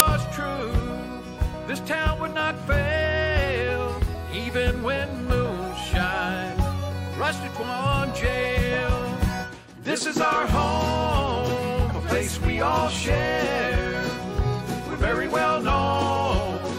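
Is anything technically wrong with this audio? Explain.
Yes. At 0.0 s there is a case of file tags played as audio. An embedded cover picture, stored as compressed data, is read as samples and gives a click of very loud white noise. On a waveform it is a solid block at very high level with hard edges, and on a spectrogram a bright stripe across all frequencies.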